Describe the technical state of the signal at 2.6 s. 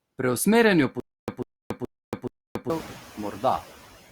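At 2.6 s the signal sits inside a stutter with silent gaps, which runs from 1.0 to 2.70 s. The same 145 ms fragment recurs every 425 ms, with about 280 ms of dead silence after each. The likely cause is a stalled stream replaying its last buffer on each retry. At 2.6 s the signal is in the final gap. The waveform is flat, and the spectrogram is a dark column.

Noise suppressor artifacts are also present throughout. The background is pulled down by about 11 dB, band by band. On a spectrogram this appears as a noise floor that darkens between syllables.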